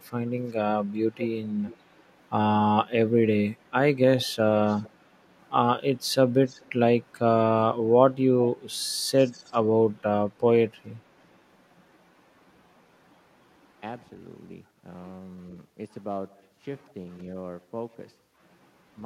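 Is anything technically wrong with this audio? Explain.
Yes. An echo leak appears seven times: 0.26–0.53 s, 1.18–2.0 s, 4.2–4.33 s, 4.67–4.9 s, 6.46–6.72 s, 9.18–9.59 s and 10.9–10.96 s. A delayed copy of the speech trails the original by about 0.42 to 0.45 s, with the lag creeping longer over the clip. It is loudest at 1.18–2.0 s, roughly 15 dB down, and elsewhere quieter, roughly 25–35 dB down. The likely cause is a far-end loudspeaker whose echo canceller let some of the returned signal through.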